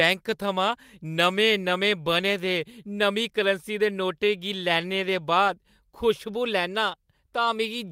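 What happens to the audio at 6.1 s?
Nothing goes wrong at 6.1 s: the speech continues cleanly through that moment, with no dropout, click or other fault to be heard.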